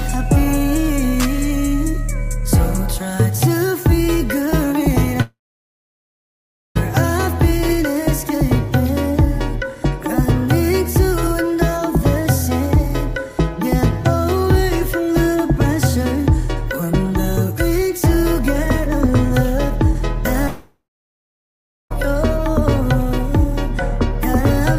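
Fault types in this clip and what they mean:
long network dropout: Audio likely stopped arriving over the network for about 1.5 s from 5.21 s and 1.4 s from 20.47 s. Each time the last sound smears into a fading buzz, then over a second of silence, and the audio resumes without the lost stretch.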